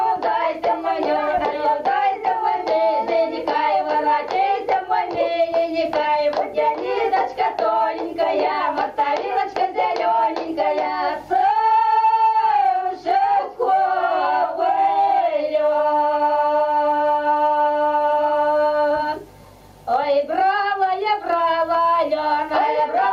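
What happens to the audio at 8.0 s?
At 8.0 s you're hearing the gain pumping that runs through the whole clip. The gain swings by something like 15 dB, so loud and soft parts sit oddly close together and everything feels squashed. The likely cause is the input gain set far too high for the mic, with a fast limiter or compressor clamping down on every peak.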